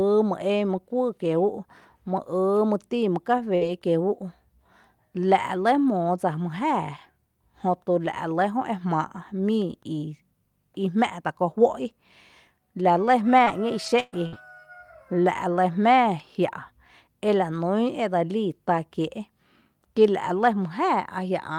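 Just after "tin mý", at 3.37 s, a lost packet rebuilt from error correction passes by as a 20 ms patch. The following packet carried a low-bitrate spare copy, and the decoder played it, so nothing drops out. The frame turns briefly coarse and grainy. Unlike concealment, no sound is guessed or stretched. The same 20 ms roughening returns at 3.61 s, 3.67 s and 4.15 s.

Between 3.55 and 3.63 s, still shortly after "tin mý", comes a burst of packet loss. About 60 ms in a row failed to arrive in time. The receiver spent roughly 56 ms extending the last sound and fading it, so it smears into a held buzz or dying hiss. The audio then jumps ahead with that piece gone. This is a single longer hole, not a scattering of tiny ones.

At 3.79–3.83 s there is a short concealed packet loss of about 20 ms, with around 15 ms filled by continuing the preceding sound before blending back. It comes across as a quick smear or wobble rather than a fade. 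Its brevity separates it from the burst just before, and it could swallow a short consonant.

From 13.39 to 14.34 s, repeated packet loss produces robotic sound. Three gaps totalling about 200 ms, the longest 123 ms, land close together. Roughly a fifth of that stretch is patched, partly with coarse rebuilt frames. The repeated patching gives a choppy quality with fragments missing, a run of failures rather than one isolated dropout.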